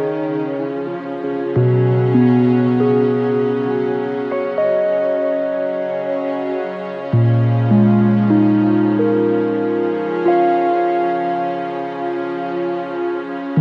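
No technical faults can be heard at any point in the audio.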